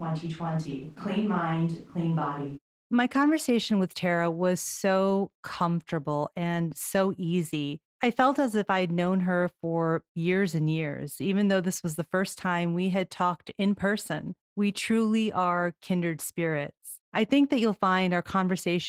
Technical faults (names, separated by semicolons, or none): Opus voice compression; switch to a distant microphone